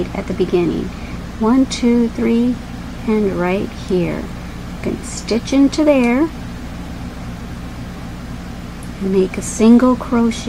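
At 1.14 s there is a brief rough blip, a tiny patch of noisy smear where the tonal detail goes grainy for an instant before the sound carries on. This is lost LE Audio frames: about 10 ms of the Bluetooth LE Audio stream, consistent with a single frame, never arrived. The LC3 decoder covered the gap by repeating the last spectrum with random signs, so the pitched content blurs into noise. The gap is too short for the concealment to fade toward silence. The light lossy compression on the stream leaves only a slight trace of its own.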